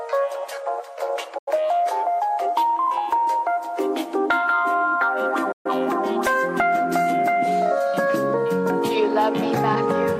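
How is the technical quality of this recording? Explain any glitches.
The recording has two digital broadcast dropouts, at 1.38 to 1.52 s and 5.52 to 5.70 s. In each, the receiver lost valid frames and muted until clean data resumed, so the sound fades out in about 8 ms, falls silent, then returns with the missing material gone. The gaps of about 85 ms and 128 ms suggest two and three lost frames of roughly 43 ms each. A waveform shows flat near-silent stretches, and a spectrogram shows blank vertical bands with sharp edges.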